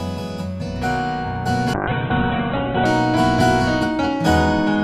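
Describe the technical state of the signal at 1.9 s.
A call bitrate drop runs from 1.74 to 2.93 s: the encoder, starved of bits, codes coarsely and cuts the band from 20 kHz to 4 kHz, which fits a fall to around 8 kbps. The sound turns muffled and rough until recovery.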